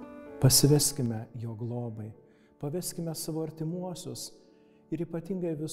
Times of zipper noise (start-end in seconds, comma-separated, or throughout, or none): 0.65-1.30